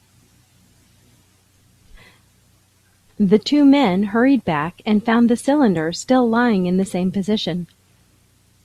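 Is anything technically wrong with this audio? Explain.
No, nothing technically wrong turns up anywhere in this speech recording.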